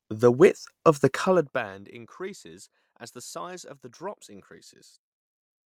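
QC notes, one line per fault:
No technical faults are present in the signal, and its level behaves as expected throughout.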